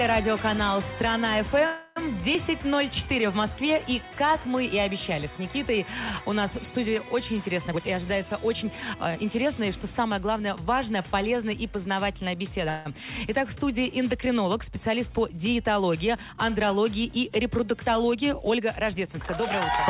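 At 1.66 s the sound stalls for about 0.30 s, and again at 12.70 s for about 0.15 s. Both times the last sound is carried on as a fading buzz rather than dropping to silence, then resumes where it left off with nothing lost. These are call audio freezes, likely caused by packets arriving late and the jitter buffer running dry, each adding its length to the delay.

From 7.68 s to 9.54 s the audio runs about 16% fast at unchanged pitch and sounds hurried. This is a jitter buffer speed-up: the receiver trims short pitch-period slices repeatedly to shed roughly 0.3 s of backlog. A milder speed-up, about 7% faster, follows from 18.04 s to 19.43 s and removes around 0.1 s.

Throughout, the audio stops at 4 kHz, which fits a G.711 call codec.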